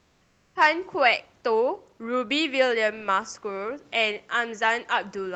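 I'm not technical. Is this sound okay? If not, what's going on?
No. Two things go wrong at the very start.

From 0 to 0.55 s you hear comfort noise in place of the background. The real room sound is missing. Instead there is a flat, even hiss, noticeably quieter than the room. This likely happens because the calling app stops sending sound when it thinks nobody is talking. The receiving end then fills the gap with made-up noise. It is a rough stand-in for the real background.

At 0.51 s the first word begins too suddenly. This is an onset clipped by the voice detector. About 40 milliseconds of the word's soft beginning are gone. The detector was likely slow to notice that speech had started. That first sliver was never sent, so the word seems to jump in.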